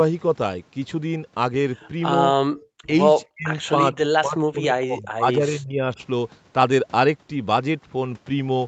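Speech recorded over a call, with echo-canceller faults. The far end was most likely playing on a loudspeaker, and its echo canceller let some of that sound back into the microphone. The result is an echo leak from 1.80 to 1.89 s: a faint copy of the speech about 30 dB below it, trailing 275 ms behind, heard as a short ghostly scrap. At 2.54 s the echo canceller cut the microphone hard while the loudspeaker was active. This background gating makes the room sound drop by about 32 dB for around 40 ms before it snaps back. Finally, both sides talked at once, and the canceller likely could not tell the local talker from the loudspeaker echo, so it turned the speech down too. This speech suppression in double talk is a shallow dip of roughly 10 dB at 2.86 to 2.90 s and a near-dropout of around 40 dB from 3.31 to 3.49 s. From 3.78 to 5.99 s come repeated cuts of roughly 30 dB, adding up to about one and a half seconds. 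The audio stops at 8 kHz, consistent with a wideband call codec and ordinary call microphone filtering.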